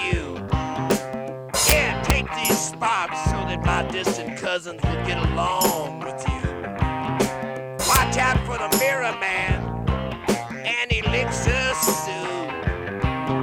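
Integer overflow produces violent wrap-around cracks at 0.91, 1.69 to 1.72, 2.10, 5.65, 7.95, 8.73 and 11.89 s, where peaks exceeding full scale by up to about 4 dB flip sign instead of being limited.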